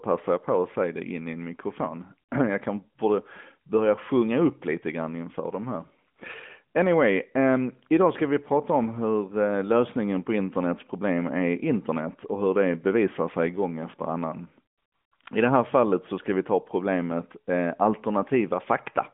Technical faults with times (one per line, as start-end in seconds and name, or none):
none